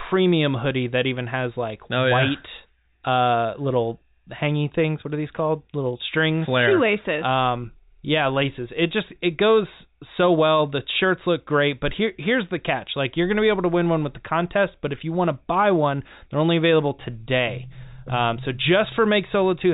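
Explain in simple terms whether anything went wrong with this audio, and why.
Nothing stood out as wrong on listening to this speech, which has the narrower, telephone-like sound of an ordinary phone line.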